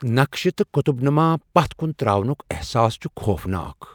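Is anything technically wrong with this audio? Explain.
No, nothing is technically wrong with this audio.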